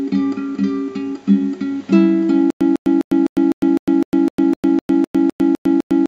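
At 2.50 s the sound turns into a stutter with silent gaps that lasts to the end. A 150 ms burst repeats 14 times, each followed by about 104 ms of digital silence. The cycle is steady at 254 ms. The likely cause is a stalled stream replaying its last fragment while the following audio is lost.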